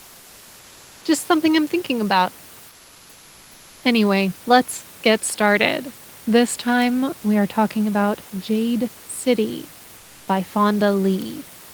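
From 2.69 to 3.83 s, a stretch of about 1.14 s, the room's background is replaced by comfort noise: a steady, featureless hiss about 3 dB quieter than the real background, which normally sits around 28 dB below the loudest speech. The likely cause is discontinuous transmission of the kind Opus uses, where the sender goes quiet during a pause and the receiver synthesises shaped noise. On a spectrogram the textured room noise gives way to a smooth, uniform band, and the waveform's noise floor drops slightly.

Bit error spikes occur at 6.82 s and 11.22 s. Each is a single corrupted sample, where one flipped bit made the value jump by a power of two before it returned at once. Each is heard as a sharp, isolated tick that has nothing to do with the speech around it. In the waveform it shows as a lone vertical needle, and on a spectrogram as a thin full-height line spanning all frequencies.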